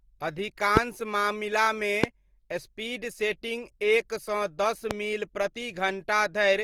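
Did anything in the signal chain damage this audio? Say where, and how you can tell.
Yes, at the codec stage. The speech is consistently rough and grainy, with audible codec damage throughout but no muffling. The bandwidth stays full, reaching about 20.2 kHz. This points to Opus compression, likely in its CELT music mode at a low rate around 24 kbps. When bits run short, CELT keeps each band's energy but fills the detail with folded or noise content. On a spectrogram the bands look fully populated but smeared and noisy rather than holed.

There are three loud pops, each a single burst lasting about 20 ms: at 0.77–0.79 s, at 2.04–2.06 s and at 4.91–4.93 s. They peak at about 20, 25 and 20 dB above the speech, and the speech continues beneath them. They likely come from electrical steps or pulses in the analogue wiring or a driver glitch. On a waveform each appears as a tall isolated spike. 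On a spectrogram each is a bright vertical line spanning all frequencies.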